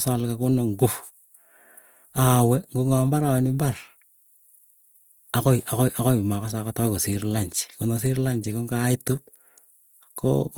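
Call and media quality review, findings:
Opus compression, plainly audible throughout the speech. Rough, grainy texture. Band energy kept, fine detail noise-filled. Full bandwidth, content up to 20.2 kHz. Likely Opus music (CELT) mode. Damage fits a low rate near 24 kbps.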